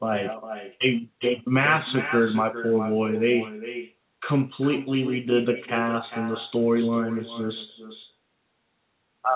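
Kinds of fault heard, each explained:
Echo with no canceller, throughout: each stretch of speech returns about 0.4 s later as a fainter copy, roughly 11 dB below the original, sounding thinner. The far end is evidently playing the call through a loudspeaker that its own microphone picks up, and nothing cancels that return path, so the sound completes a full network round trip. The call path is narrowband, with nothing above 4 kHz.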